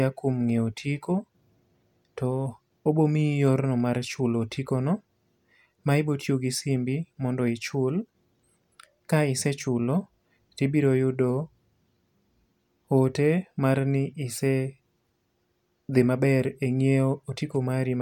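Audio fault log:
No faults detected in this speech recording.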